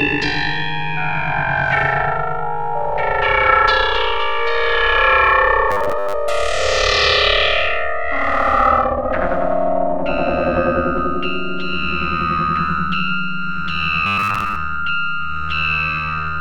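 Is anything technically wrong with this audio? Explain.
Yes. Robotic sound from repeated short buffers appears at 5.71–6.14 s and 14.07–14.56 s: a rigid, metallic 100 Hz buzz. The likely cause is a starved stream where one 10 ms stretch was looped in place of most of the missing audio.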